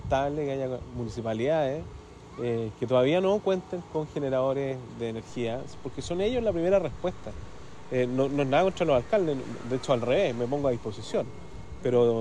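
A DC step at 5.29 s shifts the waveform's zero line by about -42 dBFS, giving a brief low thump, and the offset then holds through the end.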